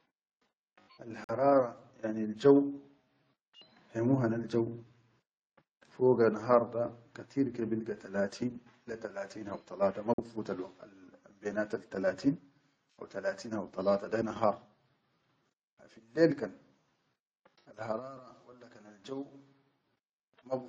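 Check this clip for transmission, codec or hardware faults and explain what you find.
Two short dropouts point to corrupt frame muting. At 1.24 s and again at 10.14 s the speech cuts abruptly to silence for about 63 ms, then resumes on time. Damaged compressed frames were likely rejected by the decoder, and the player filled each gap with silence.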